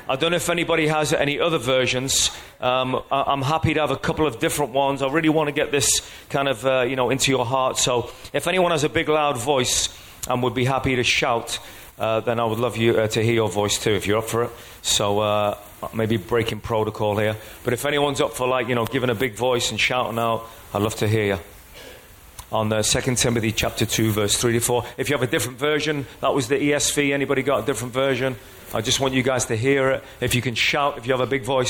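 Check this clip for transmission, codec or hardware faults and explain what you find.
One fault stands out in the clip.

A drift correction step runs from 8.09 to 8.62 s. The playback runs 5.3% fast for about half a second, raising pitch by 90 cents, just under a semitone, then snaps back to normal. This is likely a clock-matching stage jumping its rate in a single step to rebalance its buffer. Speed and pitch move together, so the sound briefly rushes and goes sharp before dropping abruptly into tune.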